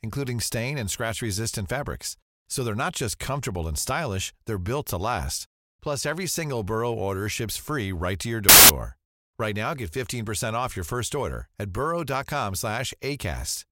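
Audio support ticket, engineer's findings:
Decoder read embedded cover-picture data (file tags played as audio) as samples. Symptom: hard-edged burst of very loud white noise, 8.49 to 8.69 s, about 0.21 s. Mechanism: the compressed picture bytes look random, so as samples they decode to very loud broadband static. Probable component: the parser, which did not skip the tag block before the audio data.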